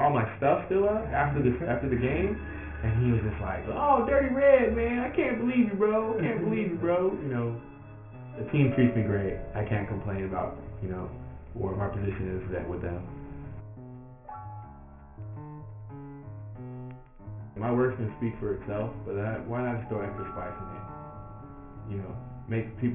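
Aliasing runs through the whole audio: top end folds back at 3 kHz, consistent with an unfiltered drop to 6 kHz, giving metallic grit about 20 dB down, not clean dullness.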